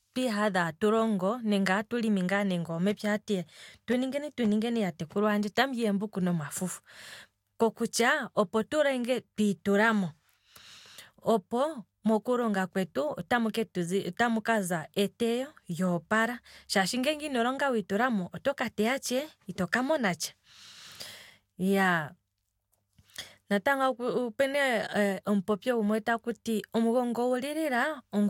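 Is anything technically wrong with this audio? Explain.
No, nothing is technically wrong.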